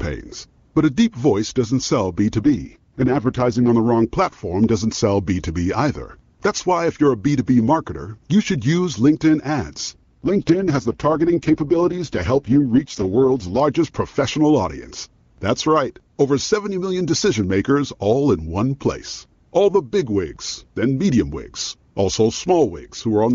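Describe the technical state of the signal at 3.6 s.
At 3.6 s the speech is near the end of an AMR rate drop (2.40 to 3.69 s). The voice turns rough and synthetic, which fits the codec dropping to its 6.6 kbit/s mode. Unlike packet loss or a bandwidth switch, there is no gap and the bandwidth stays the same.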